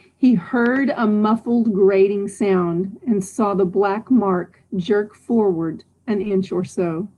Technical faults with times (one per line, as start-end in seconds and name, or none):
0.66-0.78 loud pop
6.21-6.32 short concealed packet loss